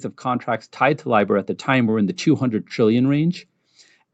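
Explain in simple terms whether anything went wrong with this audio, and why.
One thing went wrong: automatic gain rising. From 0.22 to 1.57 seconds, the speech and the background get louder together. The call's volume control judged the input too quiet. So it turned the level up slowly, over more than a second.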